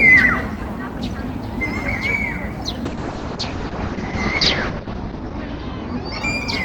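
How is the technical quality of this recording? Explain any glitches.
Quality degrades partway through because of a call bitrate drop. From 2.87 s to the end, the encoder's rate falls from 32 to 7 kbps. Coding turns coarse and bandwidth shrinks from 20 kHz to 8 kHz. The audio sounds rough and muffled, bottoming out for 1.83 s.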